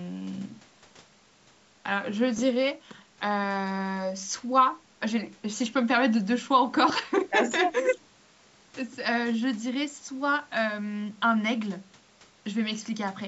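Lost LE Audio frames occur at 2.37 s and again at 6.89 s. Each time, a brief 7.5 ms stretch of the speech, which fits a single missing LC3 frame, never arrived over the Bluetooth LE link. The decoder filled the hole by replaying the previous spectrum with randomised signs. Because the loss is so short, no fade-out follows, only a tiny noisy smear in place of the clean signal, over band-limited audio that stops at 8 kHz.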